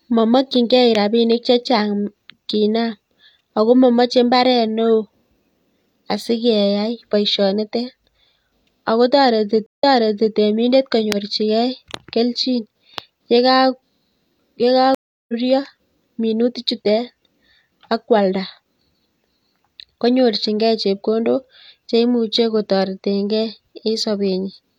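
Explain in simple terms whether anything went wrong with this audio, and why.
The speech drops out briefly twice. At 9.66 s a short gap is followed by about half a second being replayed, and at 14.95 s a longer gap skips ahead roughly a fifth of a second. Both are a stream reconnect: the connection broke, and the player reconnected and restarted mid-stream.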